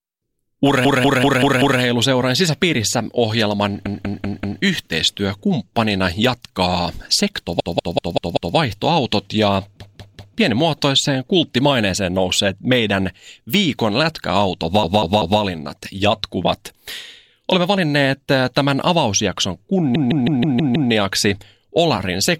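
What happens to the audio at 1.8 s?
Repeated frames end there: from 0.85 to 1.81 s a 192 ms block is played five extra times, adding 0.96 s of stuttering audio before "sisäpiirissä ohjelman yhteistyökumppanina jatkaa". Spectrogram and waveform show identical 192 ms patterns repeating side by side.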